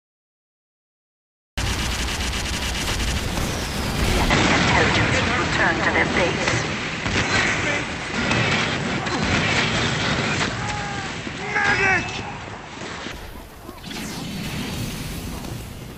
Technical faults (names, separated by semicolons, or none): cut-off start; input switched to a poorer device